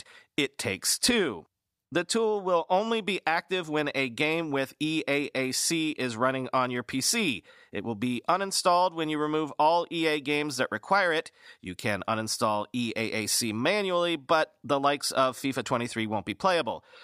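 No technical faults are audible.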